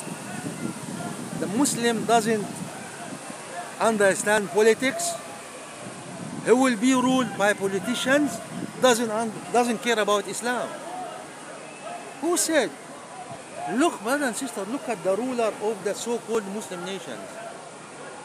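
At 1.38 s, 4.38 s and 16.35 s the sound skips very briefly. Each skip removes only a few milliseconds, and the audio on either side is butted together with no gap. This is audio missing between chunks. The likely cause is a recorder or processor working in 3-second blocks and dropping a sliver at each handover. The first two skips sit exactly 3 s apart, and the third falls on the same 3-second grid.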